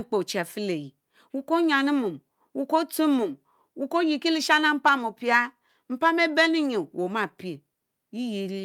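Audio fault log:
There is no fault in this speech audio.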